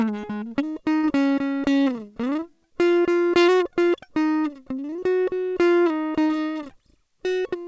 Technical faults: burst of packet loss; short concealed packet loss

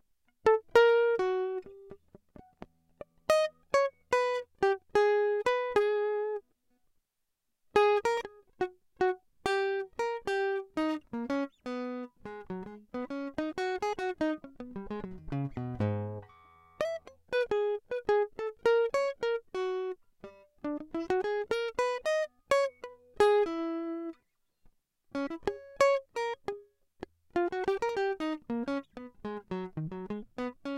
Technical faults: none

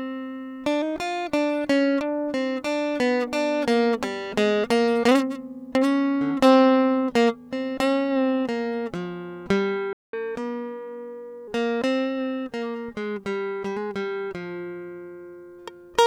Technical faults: playback stall; catch-up at higher speed

